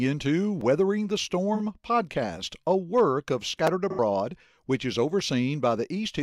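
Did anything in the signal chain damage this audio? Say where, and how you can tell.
Yes, in two places. At the driver or buffer stage there's a repeated buffer at 0.61 s and again at 3.67 s. Each is a tiny click-like stutter where the output ran dry and replayed its last block once, so one short slice of speech plays twice with a hard seam. The repeated piece is about 5.3 ms, which fits a 256-sample buffer, and roughly 5 ms of real audio never made it out.

The other damage is in the codec: AAC frame loss with concealment, from 1.54 to 1.60 s and from 3.90 to 3.99 s. Both spots turn smeared and a bit noisy, with a phasey edge, because the decoder was filling the hole from the last good spectrum rather than real data. The first gap is about 43 ms, consistent with one lost frame. The second runs about 85 ms, which fits two frames in a row, so the patch there lasts noticeably longer.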